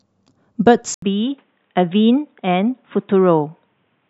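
At 0.94 s the speech breaks for 80 ms, then continues to the end with nothing above 3.8 kHz, a little quieter and over a faint new background noise. That points to an input switched to a poorer device rather than plain filtering, which wouldn't bring the gap, level drop and changed noise.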